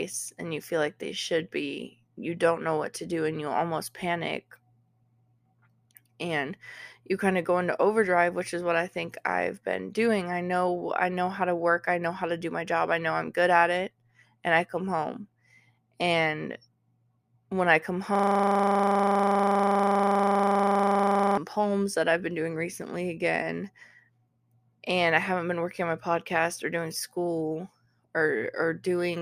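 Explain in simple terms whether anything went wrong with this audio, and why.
System hang loop, 18.15 to 21.37 s: the computer froze, and the sound hardware replayed one 40 ms scrap of speech 80 times, a rattling buzz at 25 per second.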